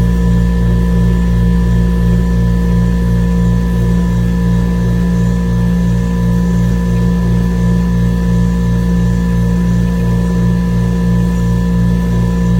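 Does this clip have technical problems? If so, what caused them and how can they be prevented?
No, no technical faults can be heard in this recording of sounds. With nothing wrong, there is nothing that needs preventing.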